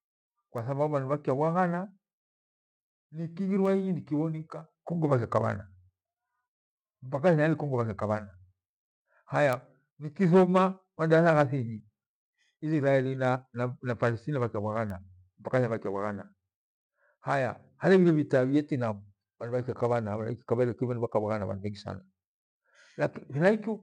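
A speech recording with four bit error spikes, each a single sharp tick sitting right on top of the audio: at 0.58 s, 3.65 s, 9.53 s and 14.90 s. They peak at about -25, -31, -12 and -25 dBFS, so the one at 9.53 s is the loudest. Each is a one- or two-sample jump where a flipped bit knocked the value off by a power of two before it snapped back, giving a broadband click with no relation to the speech.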